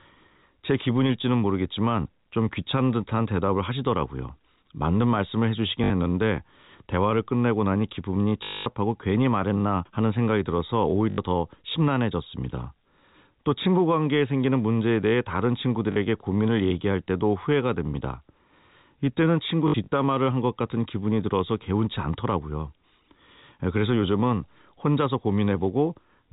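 Packet loss with last packet repeated at 5.84, 8.44 (220 ms), 11.1, 15.92 and 19.68–19.92 s: lost packets are replaced by repeats, giving robotic stutters buzzing at 50 Hz, consistent with 20 ms packets.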